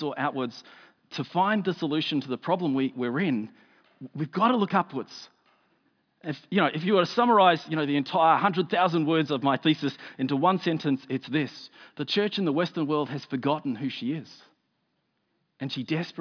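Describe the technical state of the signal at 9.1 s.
At 9.1 s the speech signal is intact, with no fault audible at that moment.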